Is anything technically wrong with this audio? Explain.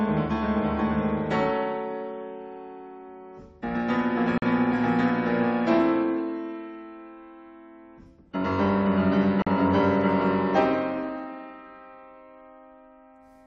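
Yes, there is a gap between chunks, twice: from 4.38 to 4.42 s and from 9.42 to 9.47 s. The audio seems to have been delivered in segments of about 5 seconds, and each join gets 44 ms of inserted silence, perhaps from padding or a late start on the next segment. Nothing is missing, but the flow stops abruptly at each join, leaving a short, hard-edged hole in the sound.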